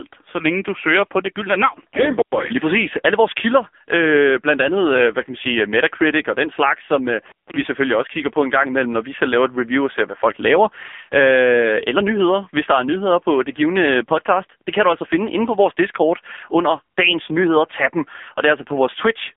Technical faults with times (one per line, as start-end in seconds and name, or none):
0.00-19.36 AMR narrowband mobile codec
2.18-2.37 intermittent contact
7.25-7.54 intermittent contact